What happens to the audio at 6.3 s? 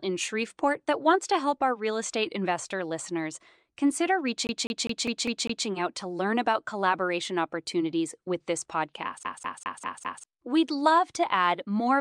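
Nothing goes wrong at 6.3 s: the speech runs on intact through that moment, with no dropout, click, glitch or other fault to be heard.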